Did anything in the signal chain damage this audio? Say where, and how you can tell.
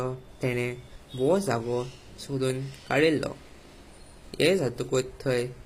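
Yes. Across the whole speech clip the s sounds come out gritty and lispy, the treble sounds synthetic, and nothing reaches above 15.5 kHz. That points to the codec stage, likely HE-AAC compression at a low bitrate near 24 kbps, rebuilding the top band from copied lower harmonics.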